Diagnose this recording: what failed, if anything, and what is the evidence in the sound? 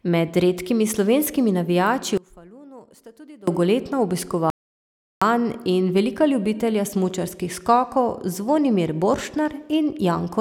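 From 2.18 to 3.47 s, the speech falls about 24 dB. One channel inverted, likely through analogue wiring polarity, cancels the centre in mono.

Audio dropout to silence occurs from 4.5 to 5.22 s. The 0.71 s gap holds no room tone. The input was likely lost while recording continued.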